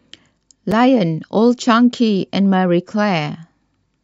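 At 0.71 s there is a block of digital silence in the speech. For about 5.8 ms the signal drops out and returns with no fade. That fits a 256-sample buffer left unfilled. The gap is short enough to be heard as a tick or dip rather than as silence.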